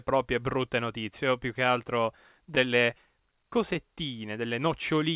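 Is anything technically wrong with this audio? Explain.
Yes. Between 2.46 and 3.77 s the speech has scattered short gaps: about seven small packet losses, the longest only around 15 ms, together roughly 70 ms. The receiver hid each one by extending the preceding sound, so the result is brief ticks and tiny smears, and the passage runs about 8 ms long. Unlike a single dropout, there is no silent hole, and the hiccups are spread out. The telephone-band ceiling at 4 kHz fits a G.711 call path.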